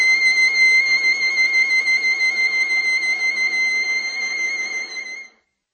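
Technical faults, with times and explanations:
Throughout, MP3 compression: the music stops at 8.3 kHz and sounds watery, likely from an MP3 encode near 32 kbps; a spectrogram shows a flat ceiling and flickering gaps.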